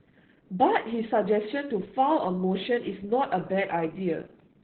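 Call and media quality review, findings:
Opus voice compression, whole clip. Speech muffled, hoarse, slightly robotic; nothing above about 4.3 kHz. Probable component: Opus encoder in SILK narrowband mode, heavy codec damage consistent with roughly 8 kbps. Linear-prediction coder quantises excitation coarsely; band narrowed to about 4 kHz at this low rate.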